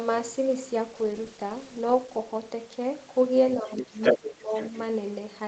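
From 0.96 to 2.32 s a call bitrate drop makes the speech rough and watery for over a second, which fits the encoder being pushed from 32 down to 14 kbps. The level holds steady throughout, which separates it from suppression: the sound is coded more coarsely rather than turned down.

From 3.61 to 3.98 s the speech sinks, by around 20 dB at its deepest, likely speech suppressed in double talk as the echo canceller ducks the talker while the far end speaks. Inside that dip, at 3.77 to 3.84 s, a second voice leaks through about 10 dB below the speech, likely the other side's voice leaking through.

The same pair repeats. From 4.02 to 4.18 s the leaked voice rises to about 5 dB above the speech. From 4.17 to 4.52 s the talker dips again, by roughly 15 dB. From 4.54 to 4.84 s a fainter scrap of the other voice returns, about 15 dB down. The suppression is a loss of the talker's own level, while the leakage adds a separate voice on top.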